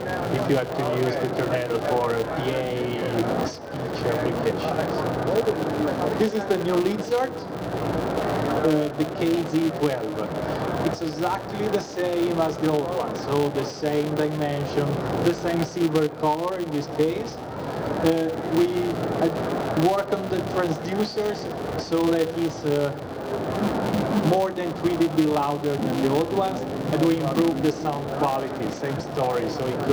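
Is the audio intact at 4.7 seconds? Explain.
No. At 4.7 seconds, as throughout the clip, a filter restarted on every block loses its state at each 5 ms block boundary and begins again from silence. Each restart leaves a small transient, producing a 200 Hz buzz that rises and falls with the sound's level.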